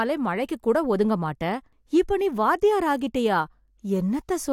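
Speech, and nothing is technically wrong with it.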